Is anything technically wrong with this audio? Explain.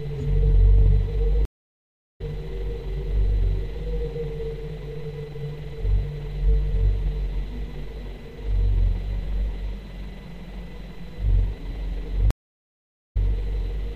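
Yes. The audio drops out twice, from 1.45 to 2.21 s (about 0.74 s of silence) and from 12.31 to 13.17 s (about 0.85 s), resuming each time a little further on, skipping about 0.4 s and then a fraction of one. This is a stream reconnect: the connection broke, and a fresh decoder restarted mid-stream, softly easing the sound back in.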